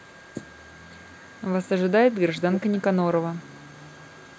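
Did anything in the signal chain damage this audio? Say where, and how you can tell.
Yes, echo leak at the call-processing stage. A delayed copy of the speech trails by 0.31 s from 0.0 to 1.42 s, then by 0.3 s at 2.32–2.82 s and 3.12 s onward. It is faint, except loud in the middle stretch. Likely an echo canceller missed loudspeaker pickup.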